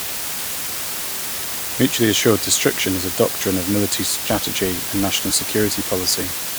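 Low bit depth with dither runs throughout the speech, from start to finish. The audio has been reduced to 4 bits, so it is rounded to just 16 possible levels, and random dither was added before that rounding. Instead of producing harsh, signal-following distortion, the rounding error becomes a steady wash of white noise sitting only about 5 dB below the speech. It is heard as a constant, even, loud hiss with no crunch or grit.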